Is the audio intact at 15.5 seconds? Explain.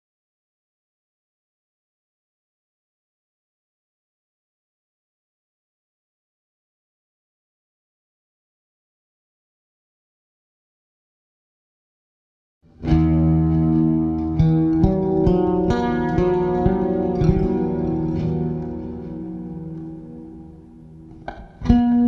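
No, 15.5 s falls inside a wrong sample rate fault that runs through the whole clip. The sound is played back at about 0.73 times its proper speed, which fits 44.1 kHz audio being run at 32 kHz, so everything is slower and about 5.6 semitones lower.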